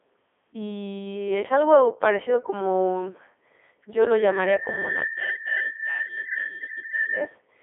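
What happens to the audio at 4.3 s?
A single piercing tone near 1.8 kHz is swelling up at that point. It starts at 4.14 s, right after "yo lo", climbs over roughly a second until it sits around 10 dB louder than the speech, and holds until 7.36 s. This is loudspeaker feedback squeal. The microphone is catching the loudspeaker it drives, and at 1.8 kHz the loop gain has passed unity, so that one frequency keeps reinforcing itself into a sustained howl.

Underneath, the speech has the robotic, buzzy character of the Codec 2 vocoder, which runs through the whole clip. At 3.2 kbit/s the codec transmits only pitch, voicing, energy and a coarse spectral envelope, then rebuilds the sound from sine waves rather than preserving the waveform. The damage is heavy, the band is confined to roughly 250 Hz to 3.5 kHz, and nothing survives above 3.7 kHz, leaving the speech thin and synthetic under the squeal.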